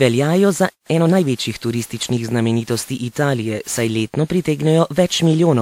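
Throughout, the speech sounds swirly, smeared and hollow. Consonant attacks blur, and nothing is present above 19.8 kHz. That is generation loss, likely from about ten rounds of lossy coding, which fits repeated WMA passes at around 128 kbit/s. Each pass adds its own quantisation noise and spectral holes.

At 0.70 s the sound cuts out mid-flow. It stays silent for about 166 ms, until 0.86 s. This is a playback stall. The player likely ran short of data or was blocked, and the output dropped to silence until it recovered.

From 0.86 s to 1.18 s the speech rushes at 1.5 times normal speed. Its pitch stays unchanged. This is time-compressed catch-up. The player clears its backlog by cutting out small pieces of audio and cross-fading across the joins.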